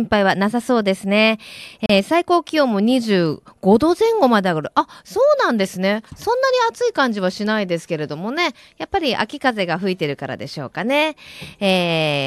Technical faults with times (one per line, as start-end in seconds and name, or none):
1.86-1.89 gap at a join of encoded pieces